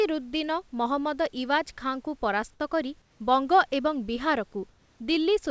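From 4.70 to 5.00 s the room background in the pause becomes a smooth, featureless hiss, shifted by about 2 dB. This is comfort noise in place of the background, likely from discontinuous transmission, with the receiver synthesising shaped noise while the sender stays silent.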